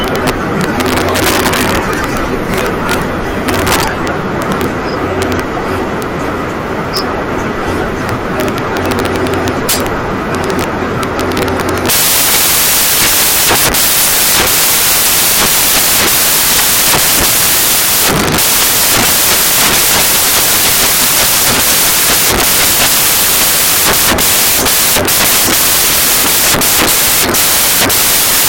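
From start to end, samples built from the wrong bytes turn the speech into loud white noise, unlike steady hiss, which stays level underneath.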